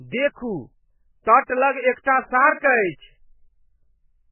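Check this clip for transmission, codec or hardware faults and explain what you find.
One codec fault runs through the whole clip. Throughout, the speech sounds watery and swirly, with nothing above 3 kHz, which likely points to MP3 compression at a very low bitrate, around 8 kbps.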